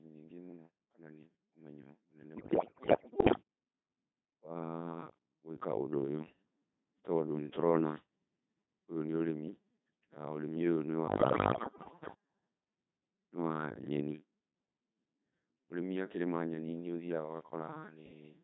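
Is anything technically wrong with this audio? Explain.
Yes. The speech has been carried through a Codec 2 vocoder for its whole length, and there are two bursts of bit errors on digital voice radio.

Codec 2 vocoder (throughout): The sound points to Codec 2 at about 2.4 kbit/s, with heavy damage. At that rate only pitch, voicing, energy and a coarse spectral envelope survive, and the decoder rebuilds the voice from sine waves instead of reproducing the original waveform. The result is a robotic, buzzy, synthetic voice. The call microphone processing's high-pass filter takes out only the lowest bass, which is normal and not a fault.

Bit errors on digital voice radio (2.36 to 3.42 s and 11.08 to 12.14 s): Corrupted bits reached the vocoder in these two windows, at roughly one bit in five in the first and about one in ten in the second. At so low a rate, each bit controls the pitch, level, voicing or spectral shape of an entire frame, so every error derails a whole slice of sound. 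The voice lurches in pitch and loudness, its tone colour shifts abruptly, and it breaks into bleeps, warbles and garbled robotic noise. The first burst is the more severe.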